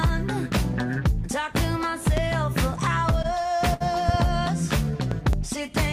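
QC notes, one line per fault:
2.17 s, 4.09–4.17 s and 5.11–5.36 s, loud pop: a single pop at 2.17 s, then two in quick succession in each later range, peaking about 15 dB above the sound (about 10 dB at the end), likely from a voltage step such as a plug, switch or static discharge. Each shows as a tall spike on the waveform and a thin, full-height vertical stripe on the spectrogram, while the underlying sound continues.
3.11–3.82 s, repeated stalls (stutter): five brief holds, about 110 ms in total and the longest 65 ms, where the buffer ran dry and the last sound was stretched until data resumed. Nothing is lost, but about 15% of the span is filled in, so it drags. The spectrogram shows smeared, repeated frames; the waveform shows copied cycles fading.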